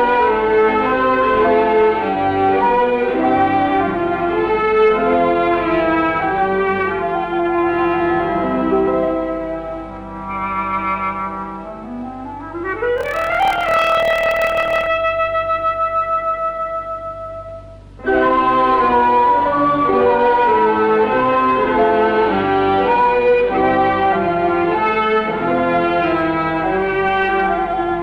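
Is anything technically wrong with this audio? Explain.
Yes. Block size mismatch (padded), 12.96 to 14.89 s: short blocks, which fits 1024-sample writes, get zero-padded, causing a 38.3 Hz buzz and 0.889× speed at normal pitch.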